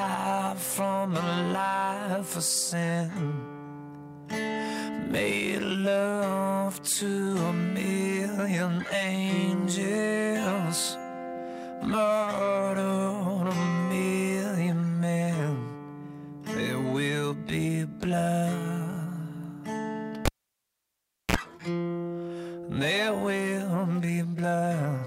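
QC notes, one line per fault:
20.25–21.36 s, cable pulled and plugged in: pop, 1.06 s near silence, brief 49 ms 60 Hz buzz, pop again. A live lead was unplugged and reseated, tip touching first.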